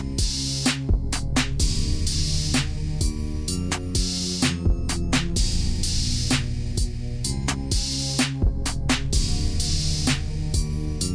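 Throughout the clip, a wrong sample rate slows everything to about 0.69 times normal speed and drops pitch by about 6.45 semitones, which fits 32 kHz material played back at 22 kHz. Because speed and pitch fall together by one ratio, this is distinct from a pitch shift or time stretch, which alter only one.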